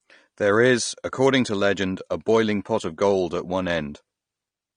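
The speech has been squeezed through a low-bitrate encoder, likely AAC compression at something like 32 kbps, which trims the top of the spectrum and leaves gaps between bands. Throughout, the audio sounds dull and smeared, with a warbling, fizzy edge on sibilants.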